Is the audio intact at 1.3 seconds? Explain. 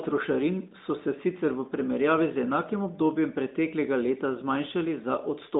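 Yes, at 1.3 s the speech is intact, with nothing there beyond the narrow 200 Hz to 3.7 kHz band and light coloration expected of the AMR narrowband mobile codec running at 12.2 kbps.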